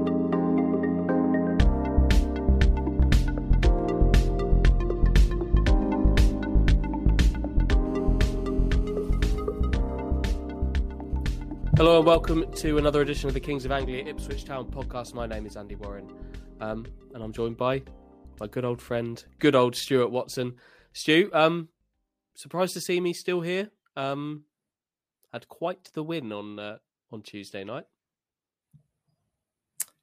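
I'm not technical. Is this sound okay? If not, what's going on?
No. GSM phone buzz, from 7.87 to 9.15 s: a hard, raspy buzz pitched at 217 Hz. A nearby 2G mobile phone in a call sends radio pulses 217 times a second, and the recording equipment picks them up and turns them into audible sound.

GSM signalling bursts, from 9.18 to 11.76 s: even ticks with a longer buzz twice a second. The same phone, still in its call but with its user silent, now sends only brief groups of pulses, and the equipment again turns these into sound.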